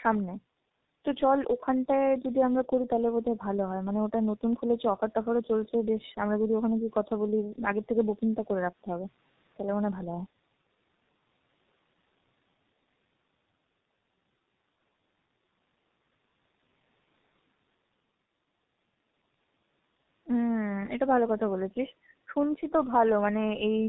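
Speech runs through the G.723.1 codec for the whole clip, heavily damaged: muffled, hoarse, consonants smeared, nothing above 4 kHz. Unlike a plain low-pass filter, the coarse, slowly updating voice model causes the roughness, which fits a bitrate around 6 kbit/s.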